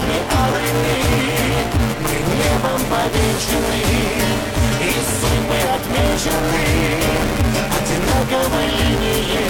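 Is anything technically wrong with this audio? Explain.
Yes. Buffer tearing runs through the whole clip. The writer and the hardware reader have slipped, so they cross inside every period. About half of each buffer repeats audio from roughly 10 ms earlier, with hard joins. This gives a steady robotic buzz at 172 Hz whenever sound is present. That rate fits a 256-sample buffer.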